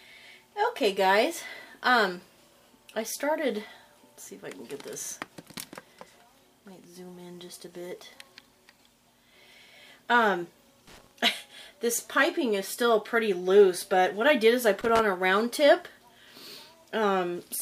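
At 10.87 s a burst of loose connector crackle runs for about 0.24 s, to 11.11 s. A worn or dirty contact is making and breaking as it shifts, chopping the signal into irregular scratching. It returns at 14.81 s for about 0.18 s, ending at 14.99 s.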